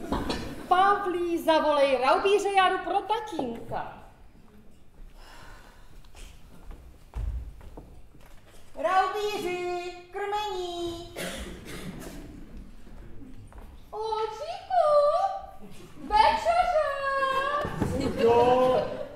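At 17.61 s there is a repeated buffer. New audio arrived late, so the device replayed its last block two extra times. Each block is about 2.67 ms, which fits a 128-sample buffer. The tiny repeats join hard, giving a brief click or buzz.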